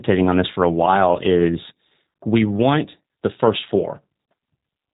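Speech coded throughout with the G.729 codec, the sound pointing to its 8 kbit/s G.729A variant, which rebuilds the voice from a vocal tract filter, pitch predictor and sparse pulses. Nothing passes above 3.8 kHz, leaving plainly audible roughness and a synthetic, band-limited tone.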